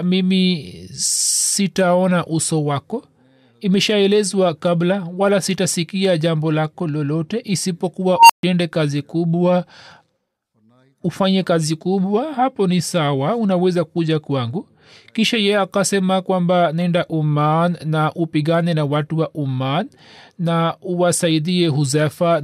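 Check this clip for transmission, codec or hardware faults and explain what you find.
One fault, an unstable filter: at 8.14 to 8.43 s a squeal around 1 kHz swells over about 155 ms until it clips, then drops into roughly 139 ms of silence before "kazi kubwa". A recursive filter with bad coefficients fed its output back until it overflowed and reset.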